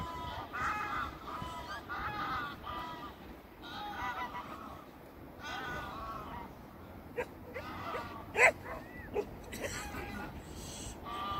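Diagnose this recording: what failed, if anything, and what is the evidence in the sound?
Nothing stood out on listening that would point to a failure at any stage of the chain.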